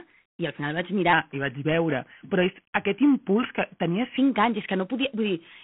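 Throughout, G.726 ADPCM coding leaves a rasping hiss riding on the speech, which points to 24 kbit/s; the spectrogram shows a 200 Hz to 3.4 kHz band, empty above 3.4 kHz. From 1.13 to 4.17 s, a section at the wrong speed plays at 0.893 times, roughly two semitones lower and slower, likely a clock mismatch; spectrogram harmonics drop and move closer together.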